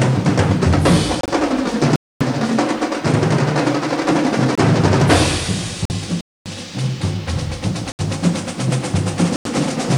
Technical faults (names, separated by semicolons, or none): corrupt frame muted; gap between chunks